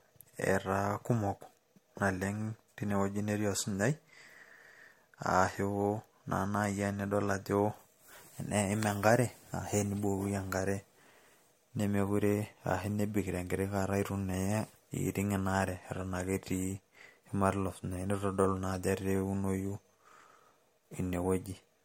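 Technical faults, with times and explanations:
Throughout, generation loss: the speech sounds swirly, hollow and smeared, with blurred consonant onsets, likely from repeated MP3 re-encoding, around four passes near 64 kbit/s. A spectrogram shows nothing above 16.6 kHz, with scattered spectral holes and blurred transient edges.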